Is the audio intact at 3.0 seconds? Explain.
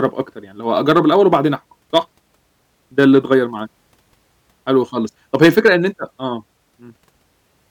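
No, there's hard clipping from 2.99 to 3.34 s: the speech overdrives a stage by about 3 dB, so its peaks get sliced flat and crackle.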